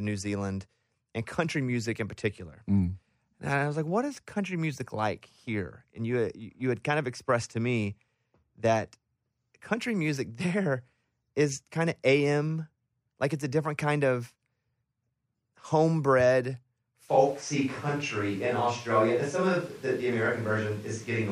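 At 17.1 s the close microphone likely dropped out, forcing a switch to a distant microphone. Speech turns suddenly roomy, hollow and bass-light to the end, with more background noise, roughly 25 dB below the speech.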